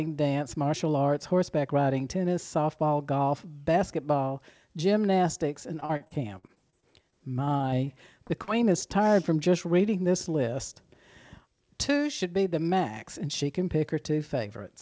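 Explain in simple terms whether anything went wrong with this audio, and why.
Yes, something went wrong: repeated packet loss (robotic sound). From 5.80 to 8.49 s, just after "golf basketball gymnastics and" and up to "is tired from just", the call kept losing small chunks of audio, about 20 times in under three seconds, each gap up to 46 ms long. The receiver papered over each hole by stretching the last bit it had heard, so this stretch sounds choppy, with bits of speech missing.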